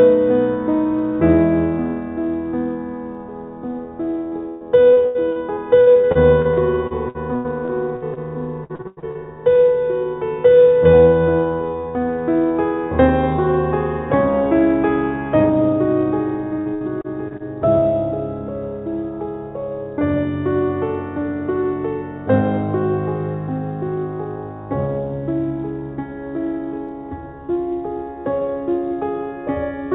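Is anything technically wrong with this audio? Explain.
Yes. The music has two kinds of fault.

Dropped samples at 0.99 s, 3.15 s and 26.89 s: each is a single sharp click. A couple of samples, a fraction of a millisecond, are likely missing, so the waveform jumps. Unlike packet loss, no sound goes missing, only that instant breaks.

Repeated packet loss (robotic sound) runs from 4.28 to 8.19 s, 8.64 to 9.26 s and 16.59 to 17.45 s. Lost packets are patched by stretching the last sound, so the music turns choppy, with pieces missing. The first stretch has 18 gaps up to 113 ms, and in the second about half the time is concealed. These repeated holes differ from the lone clicks. The telephone-band sound, with nothing above 4 kHz, fits a G.711 call path.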